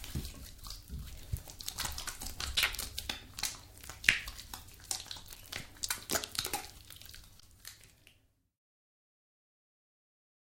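This everyday-sound clip has four brief underruns with held sample, at 2.56, 4.11 and 5.35 s and from 7.40 to 7.42 s. Each time, the output buffer runs dry and the converter freezes on its last value for 10, about 3, about 5 and 20 ms, so the waveform flatlines. A matching slice of live audio goes missing during each one.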